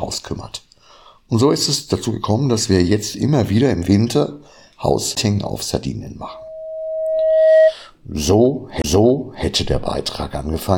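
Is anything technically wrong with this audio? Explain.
Yes, there are two kinds of fault.

A CD skip occurs at 5.15 s and again from 8.82 to 8.84 s. A knock or a flaw in the disc threw the laser onto a different turn of its spiral track, so the player muted briefly and resumed from another point. Each one is heard as a small tick during a very short silence, only tens of milliseconds long, followed by an abrupt jump in the audio to a different place.

A loudspeaker feedback squeal runs from 6.23 to 7.75 s. A microphone picked up the loudspeaker it was feeding, and at 636 Hz the loop gain rose above one, so that frequency kept reinforcing itself. It is heard as a single steady tone that swells over roughly a second and a half until it sits about 10 dB above the rest of the sound.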